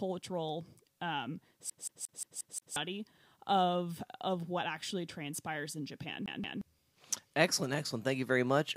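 Speech with a CD stuck on one turn: a scratch keeps knocking the laser back, replaying a 177 ms chunk six times at 1.70–2.76 s and twice at 6.26–6.61 s.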